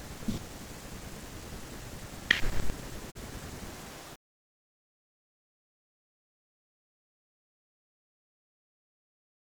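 A digital broadcast dropout hits the speech between 3.10 and 3.17 s. The receiver stopped getting usable data, either because the signal was lost or because incoming frames failed their checksum, so it muted rather than play corrupted audio. The sound fades out over about 20 ms into a short silent hole, roughly 32 ms of programme that never arrives, which fits a single lost frame. The speech then resumes mid-stream, with that stretch missing for good.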